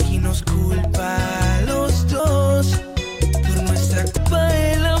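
Around 2.18 s there's a case of compressed frames skipped: the decoder never plays a short run of frames, probably a handful, so the audio lurches forward by about a tenth of a second. At 4.16 s it happens again, bigger, with something like 400 ms gone. The jumps land on multiples of a 23.2 ms frame.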